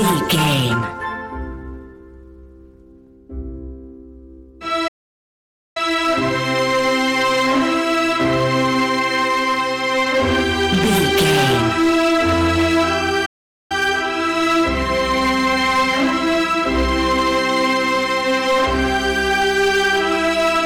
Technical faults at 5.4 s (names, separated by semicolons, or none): hard clipping; playback stall